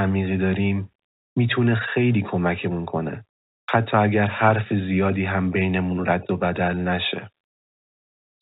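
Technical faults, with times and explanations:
No technical faults can be heard in this speech.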